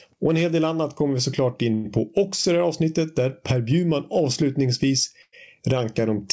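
Throughout the speech, the level behaves like gain pumping, with a swing of roughly 15 dB. Loud and quiet passages sit unnaturally close together, giving a flattened, squashed sound. The likely cause is input gain set far too high, with a fast limiter or compressor pulling it down on every loud sound.

From 1.74 to 1.86 s there is a call audio freeze. The last sound is carried on as a fading buzz or hiss for about 100 ms. Then the speech resumes exactly where it left off, so a gap has been inserted and nothing is lost. This is likely a jitter buffer running dry while packets were held up in transit.

At 2.41 to 2.46 s there is a short stall from a late packet. One packet arrived after it was due, so the receiver stretched the preceding sound by 30 ms until it turned up. A sound is held slightly too long, with a faint buzzy dip, and playback continues without any missing audio.

A second call audio freeze runs from 5.22 to 5.35 s. 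It fills about 105 ms, and the fill decays into roughly 30 ms of silence before the speech picks up again. It has the same likely cause, a delay in transit. Across the clip the call path is band-limited, with nothing above 8 kHz, which fits a G.722 codec at 64 kbps.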